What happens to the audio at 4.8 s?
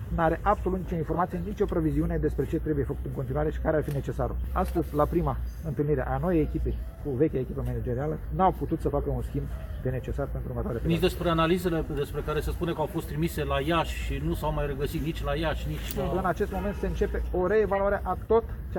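A corrupt frame is decoded at 4.75 to 4.80 s. For about 50 ms, roughly two compressed frames carry flipped bits. The decoder plays them anyway, and misread values put energy at wrong frequencies. The result is a short chirpy burst, peaking around -20 dBFS.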